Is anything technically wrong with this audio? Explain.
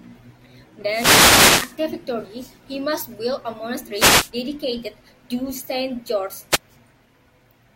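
Yes. Three wireless microphone noise hits occur: 0.87 to 1.78 s, ending just before "victory he must build"; 3.93 to 4.32 s, between "he must build a" and "dedicated to"; and 6.50 to 6.59 s. Each time, the radio link from the analogue FM microphone fades as reflected signals cancel, and the receiver's own noise rises to fill the gap. It is heard as a swish or burst of static over the speech, longest in the first hit.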